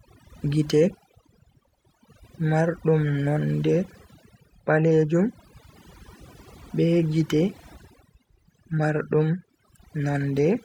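From start to finish the speech has overdone noise removal: the reduction is cranked so hard that quiet bands vanish, leaving twinkly near-silence between phrases.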